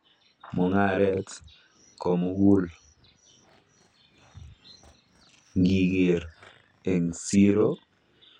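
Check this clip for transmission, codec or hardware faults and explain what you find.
One fault runs through the whole clip: channel delay, heard as doubling of the speech. One channel arrives 40 ms late and the two are summed to mono, so a second equal-level copy follows each syllable as a tight slap. On the waveform every onset repeats 40 ms later; the spectrogram shows comb-filter notches spaced 25 Hz apart.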